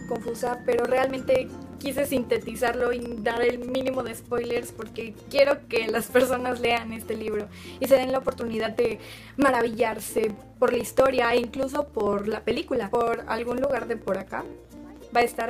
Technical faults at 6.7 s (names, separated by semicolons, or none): periodic USB or driver dropouts